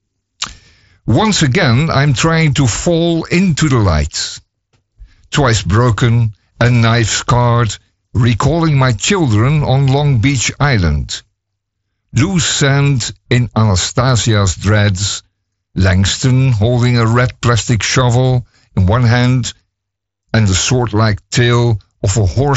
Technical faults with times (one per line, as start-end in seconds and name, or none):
none